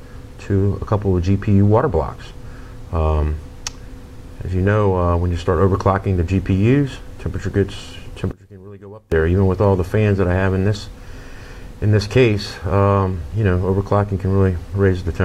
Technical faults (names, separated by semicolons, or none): one channel inverted